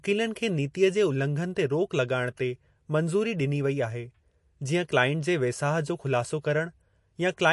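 Throughout the speech, the treble stops dead at 11.3 kHz. The damage is plainly audible, with a watery, swirling texture. The likely cause is MP3 compression short of bits, which fits a bitrate near 48 kbps. Weak frequency lines flicker between frames.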